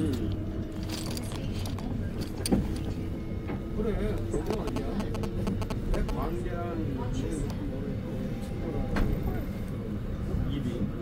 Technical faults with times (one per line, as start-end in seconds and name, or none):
4.53-6.11 GSM signalling bursts